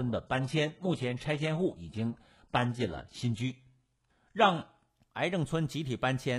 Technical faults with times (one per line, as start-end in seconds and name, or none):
0.00-4.89 adaptive stream starting at a low bitrate